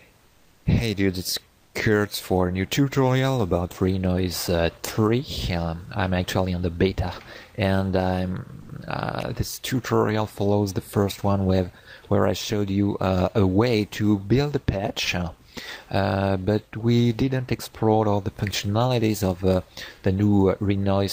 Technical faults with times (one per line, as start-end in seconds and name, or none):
0.25-0.61 comfort noise in place of the background
9.20-9.22 electrical switching spike